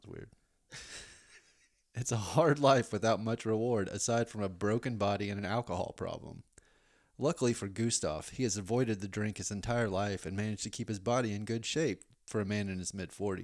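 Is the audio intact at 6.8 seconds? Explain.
Yes, the speech at 6.8 seconds is intact, with no dropout, distortion or other fault at that point.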